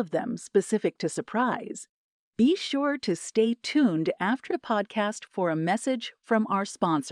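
No technical faults can be heard anywhere in the speech recording: the signal stays continuous and steady throughout.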